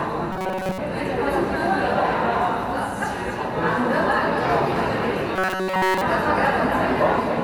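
Throughout the clip, a doubled audio track is audible: a second, full-band copy trails the original by roughly a third of a second, about 10 dB quieter, with no decay or room colour. This is likely a slower duplicate capture path or out-of-step copies.

From 0.32 to 0.78 s and again from 5.36 to 6.01 s, the audio turns into a rigid metallic buzz at 188 Hz. This is robotic sound from repeated short buffers, likely caused by a stalled feed. Fragments of about 5 ms loop in place of most of the first stretch and all of the second.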